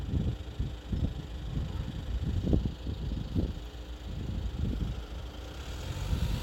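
From start to finish, mains hum sits under the sound: a steady 60 Hz tone with low harmonics, fairly loud relative to the material, from power-line coupling such as a ground loop. Unlike broadband rumble, it holds one fixed pitch and never varies with the sound.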